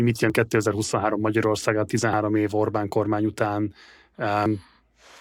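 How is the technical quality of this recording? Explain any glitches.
The recording has three audible skips. Dropped buffers (overrun), at 0.30, 2.13 and 4.46 s: samples were likely overwritten before being read, so the speech jumps ahead with no gap, about 20 ms lost at the first and about 70 ms at the others, each heard as a sudden jump.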